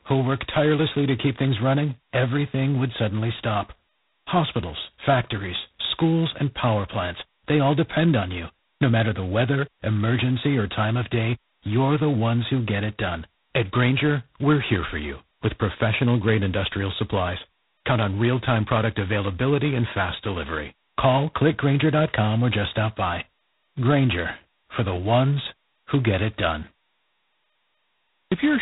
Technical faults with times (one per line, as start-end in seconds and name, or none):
0.00-28.61 G.726 ADPCM